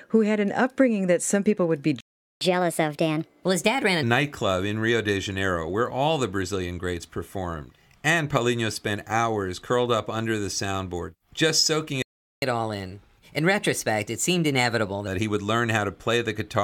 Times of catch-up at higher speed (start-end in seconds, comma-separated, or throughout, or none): 2.41-4.03, 12.42-15.07